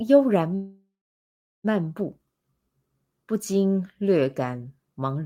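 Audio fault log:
0.55–1.66 s, call audio freeze: the sound stops advancing and its last moment is drawn out as a fading buzz, then about 0.75 s of silence, after which the speech resumes exactly where it left off, with nothing skipped but everything after arriving about 1.09 s late. This is likely a jitter buffer running dry while packets were held up. On a spectrogram the final frame smears into horizontal streaks that fade to a blank gap, and the waveform shows a decaying tail followed by a flat line.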